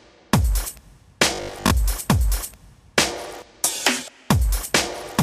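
Robotic sound from repeated short buffers runs from 1.35 to 1.71 s: the audio collapses into a rigid, metallic buzz at 50 Hz. This is likely caused by audio arriving too seldom, with about a 20 ms stretch looped to fill the gaps, so most of the real sound is skipped.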